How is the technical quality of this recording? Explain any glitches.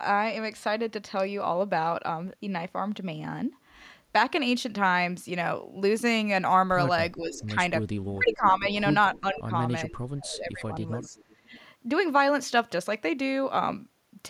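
The recording has a patch of echo-canceller trouble in the second half, from about 7.2 s to 11.7 s. Three kinds of fault overlap there.

Speech suppressed in double talk shows up first from 7.17 to 7.56 s, where the voice dips by roughly 10 dB for about 0.3 s. It comes back harder from 8.13 to 11.54 s, with about 2 s of that stretch pulled down, at worst around 15 dB. The likely cause is both ends talking at once: the canceller couldn't tell this talker apart from the loudspeaker echo, so it turned everything down. You hear the voice sag and thin out in pieces.

Echo leak turns up in four scraps: 7.35 to 7.45 s, 8.29 to 8.49 s, 9.12 to 9.40 s and 11.02 to 11.65 s. Each is a faint copy of the voice trailing 428 ms behind. The first sits at about 25 dB below the speech, the middle two at about 15 dB down, and the last at about 20 dB down. The far end is likely playing the call on a speaker, and its canceller didn't scrub everything its microphone caught, so some comes back as that ghostly repeat.

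Background gated by the echo canceller happens right at the tail of the double-talk stretch, from 11.45 to 11.50 s. The room sound drops by about 11 dB for roughly 50 ms and then snaps back. The canceller slammed the microphone down hard while the loudspeaker was active and released it a moment later, so the ambience briefly hollows out.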